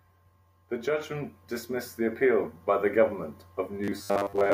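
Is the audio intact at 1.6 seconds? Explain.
No. At 1.6 seconds the speech sits inside an automatic gain rise running from 0.69 to 3.11 s. The gain control judged the input too quiet and pushed its level up by about 8 dB. Voice and background noise swell together, slowly.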